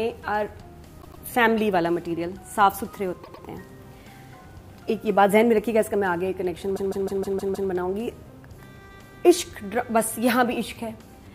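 A run of compressed frames was delivered more than once, so the decoder replays a short block of sound, which is heard as repeated frames. At 1.01 to 1.22 s and again at 3.23 to 3.44 s, a 104.5 ms block plays twice more. At 6.75 to 7.69 s, a 156.7 ms block, which fits a run of about six frames, repeats six extra times. Each repeat sounds like a stutter.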